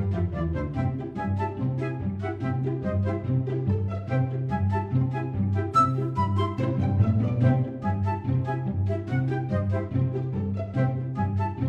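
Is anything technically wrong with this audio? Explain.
No, nothing is technically wrong.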